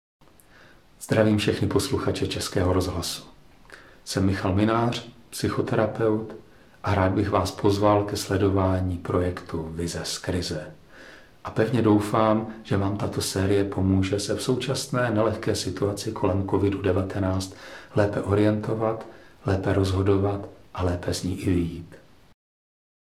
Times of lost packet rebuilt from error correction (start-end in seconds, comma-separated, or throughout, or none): none